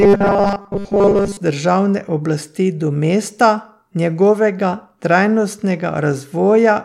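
From the very start to about 1.37 s, the speech turns into a rigid, metallic buzz pitched at 200 Hz, with the words still roughly traceable underneath. This is robotic sound from repeated short buffers: new audio likely arrived too seldom, so the playback kept looping the most recent fragment, for most of that stretch, while the real signal was skipped. A 200 Hz buzz fits fragments about 5 ms long.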